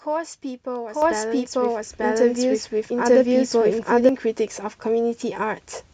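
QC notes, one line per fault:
0.89–4.09 s: doubled audio track. A second full-band copy of the speech runs about a second behind the original and at roughly the same level, so every phrase is heard twice, overlapping the next one. The copy is dry, with no decay or room colouring, and it cuts in at 0.89 s and drops out at 4.09 s with no fade. That points to a duplicated capture path, likely a slower second route or an edit holding two out-of-step copies.
1.02 s and 2.04 s: microphone volume stepped up. The input level jumps abruptly by about 7 dB at 1.02 s and again by about 4 dB at 2.04 s. Voice and background noise rise together in each step, with no ramp. This matches call software judging the microphone too quiet and raising the device input gain in single increments, rather than a change at the talker's end.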